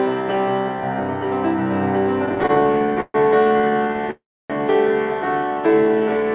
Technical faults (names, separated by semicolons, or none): repeated stalls (stutter); call audio freeze; jitter buffer slow-down